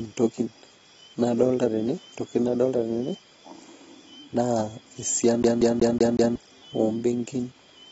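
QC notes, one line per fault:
Throughout, AAC compression: the speech sounds dull and smeared, with nothing above about 7.7 kHz and a warbly, fizzy edge on sibilants. The damage is plainly audible and most likely comes from AAC-LC coding at a low bitrate around 24 kbps, which drops the top end.
5.43 to 6.36 s, CD stuck on one turn: the same 186 ms snippet of speech plays five times in a row, a fast, even stutter with a tiny mute at each jump. It sounds like a disc skipping back one track at the same spot every revolution.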